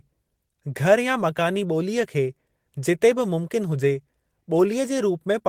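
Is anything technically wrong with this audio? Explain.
No, nothing technically wrong stands out in this speech recording; it all sounds just as it should.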